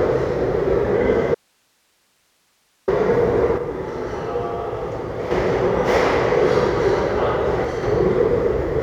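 At 1.35 s the sound cuts out abruptly. This is an audio dropout to a faint residue. For about 1.5 s only hiss remains, roughly 45 dB below the normal level. The sound returns just as suddenly at 2.88 s. There is no fade at either edge. The break likely came from the wanted signal being lost upstream while the path after it stayed live, so its own noise floor carries through the gap.

At 3.58 s the level drops by about 6 dB in a single step. This is a sudden gain jump. The sound and its background noise fall together. At 5.31 s the level steps back up. A second, shorter jump follows at 7.65 s, dropping about 4 dB until 7.83 s. Both likely come from a digital gain setting changed without a ramp.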